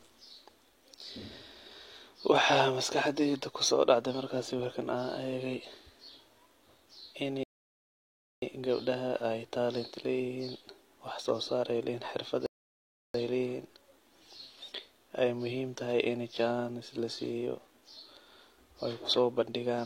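At 7.43 s the speech halts for about 0.99 s in a rebuffering stall, the player starving for data, then resumes on "gabdaha ay talent". After "leeyihn xirfad" a second stall runs from 12.46 to 13.14 s, about 0.68 s. Unlike a dropout, nothing is skipped; playback picks up exactly where it froze.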